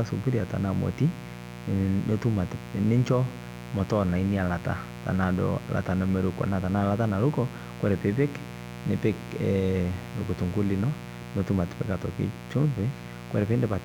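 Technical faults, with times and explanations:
Throughout: mains buzz. A steady, raspy buzz sits under the speech for the whole clip, roughly 15 dB below it. It is built on 60 Hz, with a dense stack of harmonics climbing into the kilohertz range that gives it its edge. Sharp switching spikes from a dimmer, a rectifier or an unshielded line are entering the signal path twice per mains cycle and producing it.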